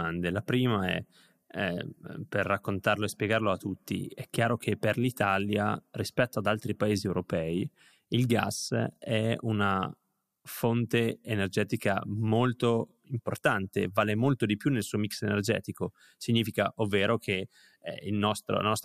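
No technical faults can be heard anywhere in this recording.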